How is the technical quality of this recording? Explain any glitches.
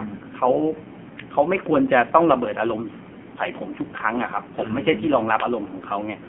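Technical quality is poor: the speech has passed through a heavily compressed mobile channel, and there is one brief dropout partway through.

Throughout, the audio carries AMR narrowband mobile codec damage. The channel passes only about 150 Hz to 3.4 kHz, and the heavy buzzy, synthetic texture fits a low AMR-NB mode around 5.9 kbps, where the vocal-tract model gets very few pulses per subframe to rebuild the speech. On a spectrogram, everything above 3.4 kHz is empty, with smeared, blocky harmonics below.

At about 3.14 to 3.19 s there is a lost AMR speech frame. The decoder failed to receive valid data and filled the gap by repeating its last pitch and vocal-tract settings at reduced gain, which fits a single lost 20 ms frame. It sounds like a short dip or warble. The waveform shows a brief envelope sag, and the spectrogram shows a smeared, repeated slice.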